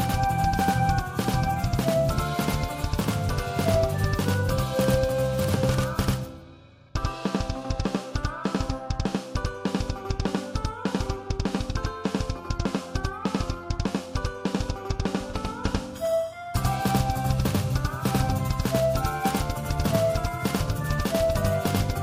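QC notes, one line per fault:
throughout, channel delay (doubling): one channel lags by 92.9 ms, which fits a 4096-sample buffer; summed to mono, it gives an equal-level slap echo.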